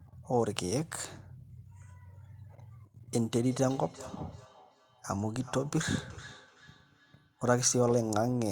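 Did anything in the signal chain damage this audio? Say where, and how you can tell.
Yes. From 3.02 s to 7.7 s the speech picks up a feedback echo between two devices: each word comes back roughly every 0.4 s, thinner and ringier on each pass, peaking about 21 dB below the speech. That's a call-processing problem. A second device in the room is playing this call out loud, and the mic picks it up again. The local echo canceller only knows its own playback, so it lets the other device's sound straight through.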